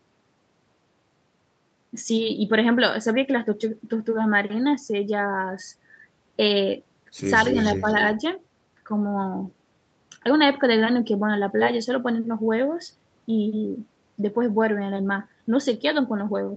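From 7.46 to 8.12 s an echo leak adds a faint copy trailing about 267 ms behind, roughly 10 dB down, likely an incompletely cancelled loudspeaker return; spectrograms show ghosted, offset harmonics. Within it, at 7.53–7.57 s and 7.76–7.86 s, speech suppressed in double talk dips the level a few decibels, likely from the canceller ducking both sides, showing as brief notches in the waveform envelope.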